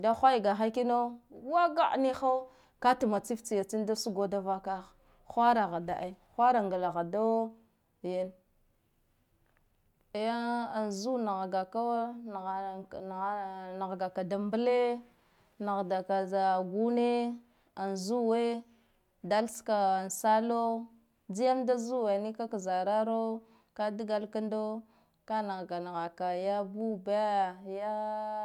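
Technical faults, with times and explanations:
Nothing technical stands out in this speech recording, so there's no fault to list here.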